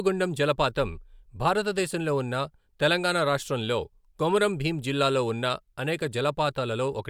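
Listening to the speech recording, nothing stood out as a technical problem at any point.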